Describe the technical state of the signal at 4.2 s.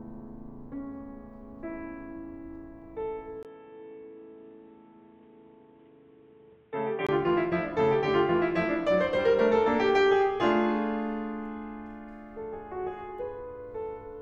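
At 4.2 s the music sounds dull and boxy, with nothing above 3.8 kHz, a faint new background noise well below the music, and no clear change in loudness. The change begins at 3.43 s with a brief 20 ms gap and lasts until 7.09 s. The likely cause is an input switched to a poorer device: the recording moved to a narrower-band microphone or headset path, with its own tone and noise, before switching back.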